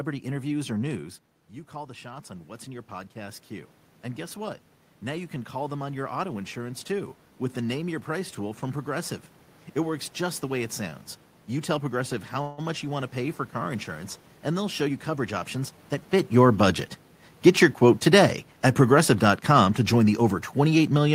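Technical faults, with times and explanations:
1.71–7.22 s, automatic gain rising: the level control raised its gain by about 10 dB after the talker dropped back, so voice and room noise swell together.
12.41–12.60 s, call audio freeze: packets were likely held up, emptying the jitter buffer; the last sound is stretched for 166 ms, then speech resumes with nothing lost.
14.82–16.09 s, jitter buffer speed-up: the receiver trimmed short pitch-period pieces, about 150 ms overall, to cut its backlog, so speech runs roughly 13% faster at unchanged pitch.
17.50–21.14 s, automatic gain falling: the level control found the input too loud or its background noise too strong and lowered its gain gradually, so speech and background sink together to the end.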